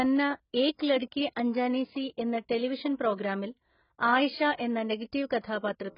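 Throughout, the speech sounds dull and smeared, with nothing above 5.2 kHz and a warbling, fizzy texture. This is likely heavy AAC compression at a very low bitrate.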